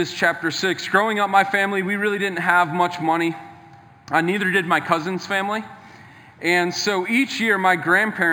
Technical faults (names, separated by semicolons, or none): imaging from linear upsampling